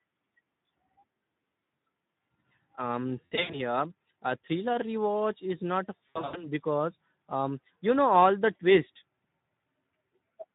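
Speex codec damage runs throughout the speech, plainly audible at a bitrate consistent with about 11 kbps: excitation is coarsely coded, leaving the voice hoarse and noisy. Between 3.26 and 3.60 s, then 6.10 to 6.49 s, VoIP packet loss concealed by the speech codec appears: 180 ms and 200 ms of scattered gaps, longest runs of 80 ms, are extrapolated into a buzzy tone or coloured noise that fades, with distortion lingering briefly after recovery.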